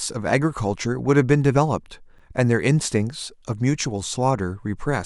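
At about 2.18 s there's a gap between stream segments: a short hole of roughly 10 ms, cut in with hard edges, right where one segment hands over to the next. The time stamps on the two pieces don't quite meet, so the player pads the mismatch with silence rather than overlapping anything. Nothing in the speech actually goes missing; the timeline just stretches by that 10 ms, which fits segments around 2 seconds long.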